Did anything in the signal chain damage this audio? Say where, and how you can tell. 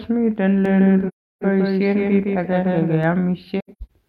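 Yes. From 0.65 to 3.03 s the speech has a second copy, about 5 dB quieter and about 150 ms late, starting and stopping abruptly: a doubled audio track, likely a second, slower capture path.

At 1.08 to 1.44 s, and in scattered gaps from 3.59 to 3.91 s, the speech fades into soft-edged silent holes: AAC frame loss with muting, where the decoder zeroed the lost frames.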